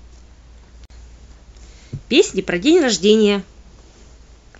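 At 0.85 s the speech drops into a gap at a join of encoded pieces, a silence of about 48 ms lasting until 0.90 s, after which the sound resumes exactly where it broke off. Two separately encoded segments were butted together untrimmed, so the encoder's start-up delay and last-frame padding survive as dead air. On a waveform it is a flat notch with smeared edges, and a spectrogram shows a clean vertical blank stripe with slightly smeared borders.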